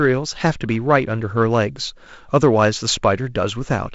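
Nothing goes wrong anywhere in this speech, which has simply come through G.722 wideband telephone coding, so there's nothing above 7.7 kHz and the faint noise in the lower band fits the 48 kbit/s mode.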